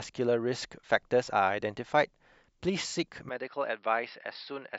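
At 3.29 s the speech turns duller and a few decibels quieter through to the end, with nothing above 5.5 kHz and a new faint background noise, and no gap at the change. The likely cause is the input switching to a poorer device. A simple filter would narrow the band without also shifting level and noise.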